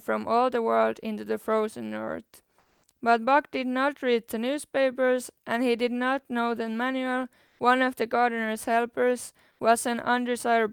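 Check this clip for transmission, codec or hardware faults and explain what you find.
There's one fault here, repeated three times: comfort noise in place of the background, at 2.59–2.83 s (240 ms), 7.47–7.59 s (120 ms) and 9.51–9.59 s (80 ms). In each pause the real room tone, sitting about 43 to 46 dB under the loudest speech, gives way to a flat, textureless hiss. It holds the same level in the first two gaps and drops about 3 dB in the last. The likely cause is discontinuous transmission, consistent with Opus DTX, with the receiver filling the silence with synthetic noise.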